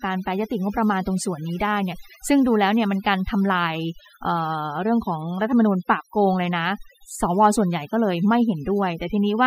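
Overdone noise removal runs throughout the speech, cutting frequency bands near the noise estimate so quiet speech detail vanishes, leaving twinkling specks.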